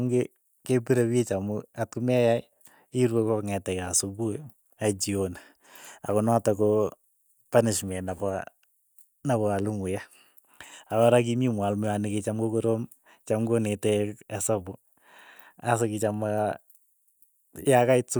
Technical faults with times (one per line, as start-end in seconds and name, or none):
none